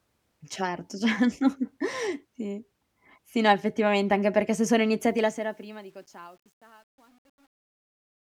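It's a speech clip with truncation distortion on the fade-out that starts around 5 s, right after "anche perché se sono". The level drops toward the end at 8.24 s, but the fade stage is keeping too few bits and adding no dither, which fits roughly 10-bit resolution. As the signal shrinks toward the smallest step, the waveform collapses into coarse square steps. From about 5.7 s to the end, the tail sounds gritty.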